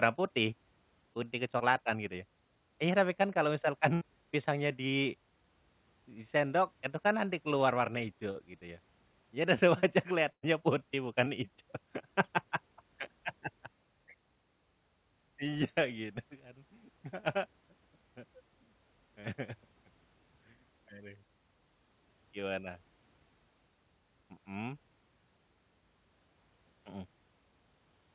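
Short concealed packet loss at 1.58 s, 8.31 s and 11.25 s: 20 to 40 ms of audio arrived too late to decode, and the receiver bridged each hole by extending the preceding sound before blending back. Each gap is heard as a brief smear or wobble.

A burst of packet loss at 3.94 s and again at 10.33 s dropped about 80 ms and then 100 ms in a row. The last sound is stretched and faded into a held buzz or dying hiss, and the audio resumes with that stretch missing.

The call path's band stops at 4 kHz, which fits a narrowband G.711 codec.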